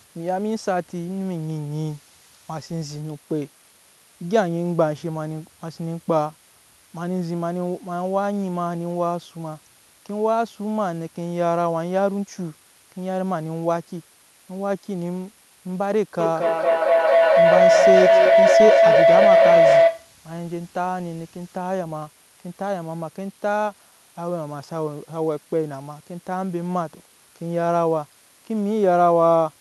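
Speech runs through the whole recording over a steady, even hiss sitting about 25 dB below the voice, with no harsh or gritty distortion on top. That is low bit depth with dither: the signal is stored with very few levels, which fits an 8-bit signal, and random dither added before rounding turns the quantisation error into constant broadband noise rather than level-dependent distortion. From 16.19 s to 20.18 s a feedback howl builds to about 8 dB above the speech. It is a tone near 700 Hz that pulses roughly every fifth of a second. Two devices in the same room on one call form a loop from microphone to loudspeaker and back, and each trip around it adds level. The repeats grow instead of decaying and narrow to the loop's favoured frequency, and the pulsing follows the loop delay. The howl stops at 20.18 s, where the loop is broken.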